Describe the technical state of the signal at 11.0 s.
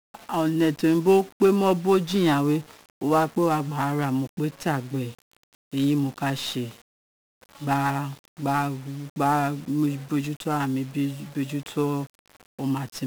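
At 11.0 s the speech carries heavy 1-bit DFPWM compression, present throughout: each single bit nudges an adaptive level up or down, spreading fuzzy, crackly noise that buries treble. A spectrogram shows a dense broadband hiss floor smothering the upper bands.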